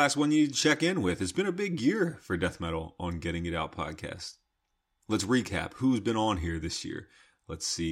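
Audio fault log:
Nothing stood out on listening to the speech in this recording.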